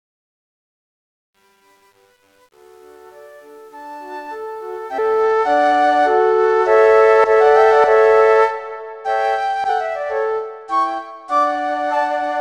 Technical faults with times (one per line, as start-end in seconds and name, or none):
0.00-5.22 truncation distortion on a fade
4.97 damaged data in a compressed stream
9.68 damaged data in a compressed stream